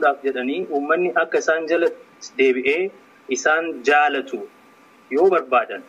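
No technical faults can be heard in this clip.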